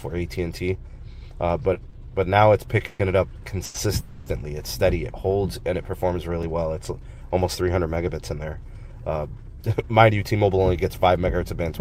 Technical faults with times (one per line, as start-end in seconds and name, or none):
1.73-1.95 short stall from a late packet
2.87-3.01 call audio freeze
3.65-3.76 short stall from a late packet
4.00-4.28 call audio freeze
5.60-7.68 CD scratch ticks
9.52-11.79 jitter buffer speed-up